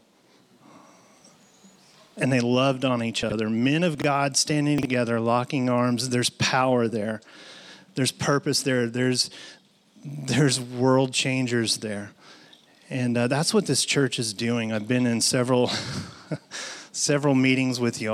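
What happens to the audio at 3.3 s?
A chunk of audio about 23 ms long was delivered roughly 70 ms late and played after the chunks meant to follow it. This is chunks out of order. From 3.23 to 3.32 s the sound briefly jumbles, with three hard joins.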